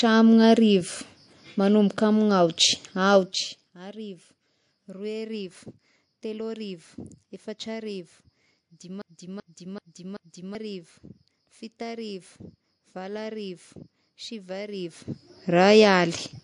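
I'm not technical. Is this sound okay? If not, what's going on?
No. The whole speech clip sounds watery and dull, with the treble cut off. That is MP3 compression, likely from squeezing the file too hard.

From 9.02 to 10.55 s there is a broken-record loop. A 0.38-second piece repeats four times, likely from a stalled stream, and the speech there is lost.

From 14.72 to 15.35 s there is zipper noise. The volume shifts a lot in about a hundred tiny steps each second, causing a fast ticking.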